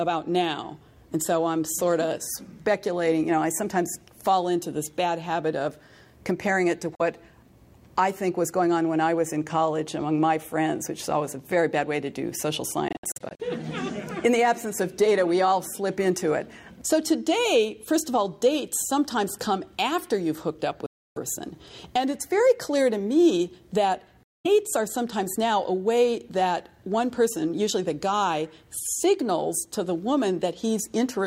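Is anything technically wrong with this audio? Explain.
Yes. The sound cuts to silence four times, at 6.95–7.01 s (about 43 ms), 12.88–13.40 s (several short gaps totalling about 235 ms, the longest 64 ms), 20.86–21.18 s (about 299 ms) and 24.23–24.46 s (about 213 ms). Each gap starts and ends abruptly, and the sound resumes further along, as if it had kept playing. This is likely a Bluetooth dropout, where late wireless packets are discarded.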